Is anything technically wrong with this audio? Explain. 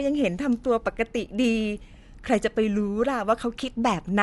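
Yes. Throughout, the speech points to Dolby Digital compression as the likely cause: nothing remains above 11.5 kHz, and starved frequency lines are refilled with noise, giving a dull, rough sound that fits roughly 64 kbps.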